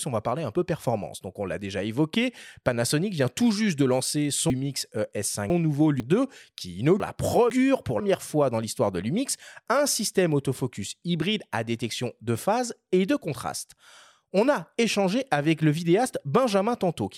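A loud pop lands at 2.14 to 2.16 s, just after "donc on l'a déjà": a single sharp pulse peaking a few dB above the speech, which carries on beneath it. It is likely a brief voltage step from a switch, plug or driver glitch.

Chunks out of order occur twice. From 4.5 to 6.0 s, after "tout juste de lancer", a 500 ms block plays two blocks late, so the speech jumps ahead, then doubles back, with three hard joins. From 7.0 to 8.0 s, before "fois dans l'histoire de", a 500 ms block is one block late, producing a shorter jumbled swap with the same kind of hard joins.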